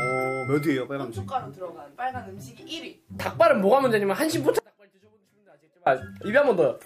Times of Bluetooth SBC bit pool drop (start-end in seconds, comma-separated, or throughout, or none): none